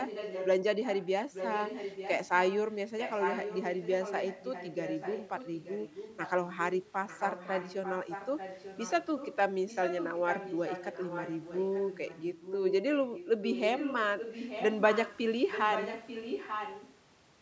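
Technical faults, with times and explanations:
0.0–0.48 s, 0.82–9.36 s, 9.68–12.74 s, 13.08–15.2 s and 15.51–16.95 s, echo leak: a delayed copy of the speech trails the original by about 0.89 s, roughly 10 dB below it through the middle runs and nearer 5 dB below in the first and last. This is likely a loudspeaker on the far end whose echo canceller let part of the replayed speech back into its microphone, so the call returned it late, ghostly and overlapping.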